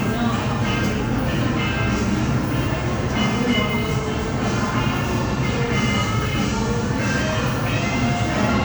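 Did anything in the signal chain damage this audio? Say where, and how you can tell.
No, the signal chain did no damage.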